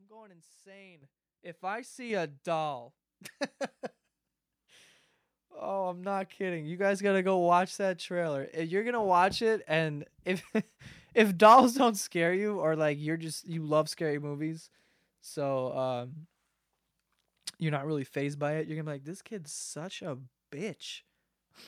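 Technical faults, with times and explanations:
1.02 s and 2.10 s, microphone volume stepped up: the call software judged the input too quiet and twice raised the microphone's input volume in a single step, by about 10 dB and then about 4 dB just before "a doll", so voice and background jump louder together.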